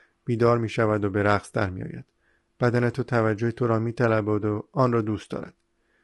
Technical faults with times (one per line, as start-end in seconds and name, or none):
0.00-6.04 low-delay AAC compression